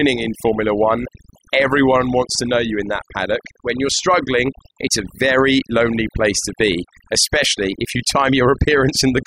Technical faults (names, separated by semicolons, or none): overdone noise removal